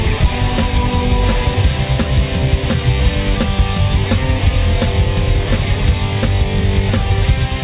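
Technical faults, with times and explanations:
No technical faults can be heard anywhere in the clip. The sound carries on without any audible break or disturbance.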